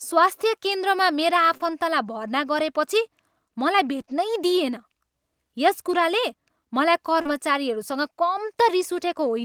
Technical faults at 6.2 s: scattered short gaps

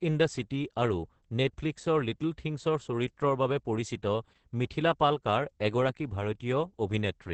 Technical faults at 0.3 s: Opus voice compression

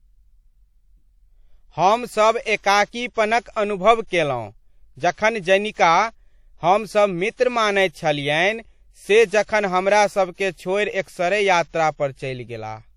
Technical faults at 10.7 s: WMA compression

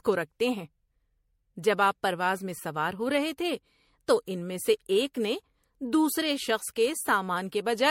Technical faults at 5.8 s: generation loss

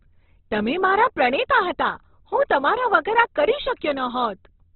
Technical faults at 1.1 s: Opus compression

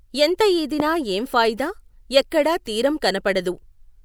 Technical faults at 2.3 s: none

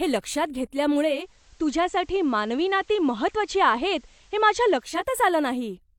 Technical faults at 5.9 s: none

